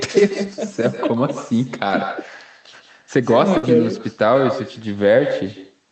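From the start and through the whole clip, every phrase is trailed by a quieter, thinner copy arriving roughly 150 ms later at about 11 dB below the speech. This is echo with no canceller: the far end's loudspeaker fed its microphone, and nothing removed the returned signal before it travelled back.

At 1.87 to 1.91 s there is a brief smear, a wobble where the sound holds rather than moves on. This is short concealed packet loss: about 20 ms never arrived in time, so the decoder extended the preceding sound to bridge the gap and then blended back into the real signal.

At 3.57 to 3.65 s the sound stalls into a held, fading continuation, then resumes with a piece skipped. This is a burst of packet loss: about 60 ms of audio was lost, and roughly 52 ms of it was covered by continuing and attenuating the last sound before playback jumped forward. The call audio is band-limited to 8 kHz, consistent with the Opus codec on this path.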